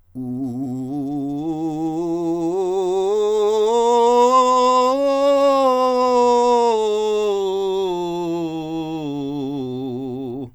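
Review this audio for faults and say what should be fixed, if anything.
Nothing stood out on listening to the music, so there is nothing here that needs fixing.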